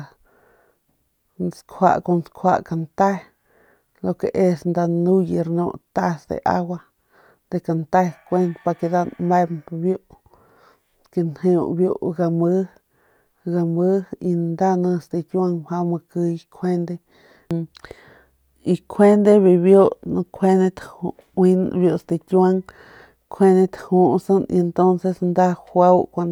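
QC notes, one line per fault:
No faults were found in this speech clip. Nothing in it calls for a QC note.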